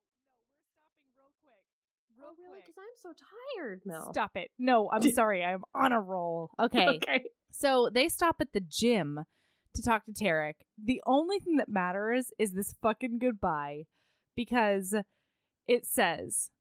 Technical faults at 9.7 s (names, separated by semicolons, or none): none